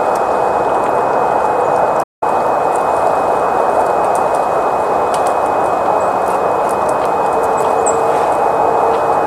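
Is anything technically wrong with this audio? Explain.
Yes. At 2.03 s the sound cuts out mid-flow and stays silent until 2.23 s, a gap of about 185 ms, before carrying on. This is a playback stall, most likely the player running short of data or its output thread being held up, so nothing reached the output until it recovered. On a waveform it shows as a flat line spliced abruptly into ongoing signal. On a spectrogram it is an empty vertical band with hard edges.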